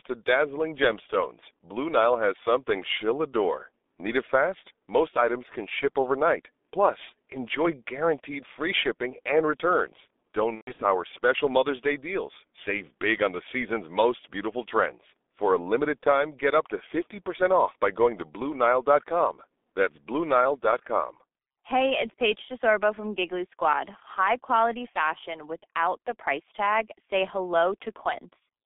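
G.723.1 codec damage runs through the whole recording. The speech is squeezed into a telephone band of roughly 250 Hz to 3.6 kHz, so it sounds thin and muffled with no low body or upper air. The heavy coding at what sounds like about 6 kbit/s gives a hoarse, rough texture, and because the coder refreshes its model of the voice only every 30 ms, consonants smear into the vowels around them.

VoIP packet loss concealed by the speech codec hits from 10.55 to 10.85 s, just after "free shipping and returns". About 180 ms of audio is missing, scattered across 240 ms, which fits six 30 ms frames dropping out, with the longest gap at 120 ms. The decoder fills each hole by repeating its last pitch and filter at falling gain, so the speech turns into a fading buzzy tone or coloured noise and stays weak and distorted until the coder recovers.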